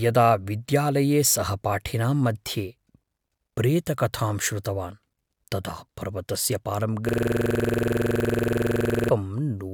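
A system hang loop runs from 7.09 to 9.10 s. The computer or its audio driver stalled, while the sound hardware kept replaying whatever sat in its ring buffer. A single 46.4 ms slice of the speech repeats exactly, 43 times over, which fits a 2048-sample buffer. Cycling at 21.5 Hz, the loop turns the speech into a rapid, rattling buzz with a mechanical, frozen quality until playback recovers.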